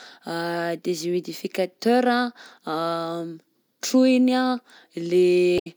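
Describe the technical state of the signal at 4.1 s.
At 4.1 s the speech signal is intact, with no audible fault.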